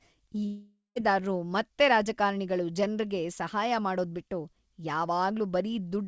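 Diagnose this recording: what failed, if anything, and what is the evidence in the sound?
Network stage: from 0.46 to 0.98 s the sound breaks off. The receiver stretches the last fragment into a fading buzz that decays to silence, then audio resumes at "ಮತ್ತೆ ರಾಜಕಾರಣಿಗಳು ಜನ್ರಿಗೆ" with half a second missing. This is likely a long network dropout.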